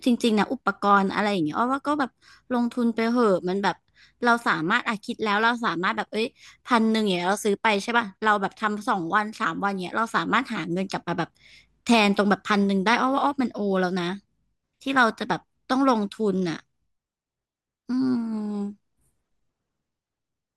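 Nothing goes wrong anywhere in this recording of speech; there's simply no fault to point to at any moment.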